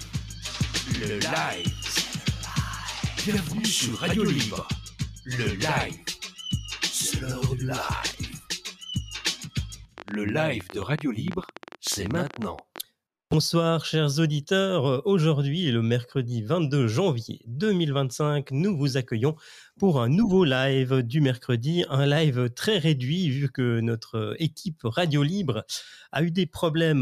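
From 9.98 s to 12.79 s a train of clicks runs over the sound: around forty short pops of much the same shape, about 13.9 per second but unevenly spaced, standing out roughly 10 dB above the program. The likely cause is interference from nearby equipment or a faulty connection or power supply injecting pulses. On a waveform they show as thin spikes poking above the envelope; a spectrogram shows a scatter of narrow vertical lines spanning the whole frequency range.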